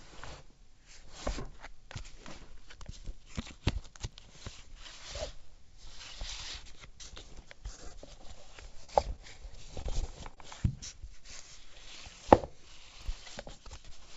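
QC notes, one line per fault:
Throughout, block size mismatch (padded): a steady low buzz at 43.1 Hz sits under the whole clip, and everything runs very slightly slow, at 0.999 times normal speed. One stage hands over blocks a little shorter than the next stage reads, so each read block ends in a short run of zeros. The resulting gap repeats at the block rate, which fits a 1024-sample read block, and the padding stretches the timing by that small ratio.
4.10–4.14 s and 13.02–13.08 s, chunks out of order: both moments sound briefly jumbled, as if the sound skips ahead and then doubles back. At 4.10 s a 20 ms chunk plays one chunk late, and at 13.02 s a 20 ms chunk plays two chunks late. Nothing is lost, but the misplaced piece creates three hard edges where the waveform does not line up.
7.76–7.80 s and 7.88–7.92 s, short stall from a late packet: the sound hangs for an instant twice in quick succession, with a faint buzzy hold each time. 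A packet arrived late and the jitter buffer ran dry, so the receiver stretched the last sound, filling 20 ms and then 25 ms, and picked up from the same point once the packet came in. Nothing is skipped, but the delay grows by those amounts, so the timing lurches.
8.84–8.90 s, burst of packet loss: a brief held, fading sound replaces the original, and playback then resumes slightly further on. Several packets in a row failed to arrive in time. The receiver carried the last sound forward for about 46 ms while turning it down, then jumped ahead, and about 40 ms of the original sound is missing. That gap produces the small discontinuity on resumption.
9.82–10.38 s, repeated packet loss (robotic sound): this stretch turns choppy, with pieces missing. Packets were lost four separate times within about half a second. Each hole, the longest 27 ms, was patched by extending the previous sound, and the patches add up to roughly 68 ms, about 12 percent of the span. 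About 80 ms of sound is gone in total. The call path passes nothing above 8 kHz.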